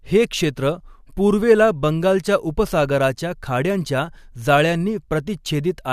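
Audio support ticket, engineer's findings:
Speech signal checked by ear with no dropouts, level changes, distortion or timing disturbances found, so no transport or playback fault is identifiable.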